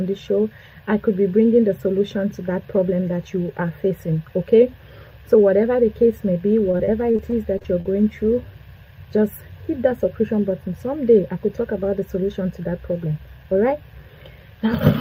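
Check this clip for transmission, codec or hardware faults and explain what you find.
One transmission fault: repeated packet loss (robotic sound) between 6.71 and 7.86 s. Short holes of up to 39 ms recur in quick succession, each patched by extending the preceding sound. About 18% of that stretch is concealed, leaving choppy audio with fragments missing.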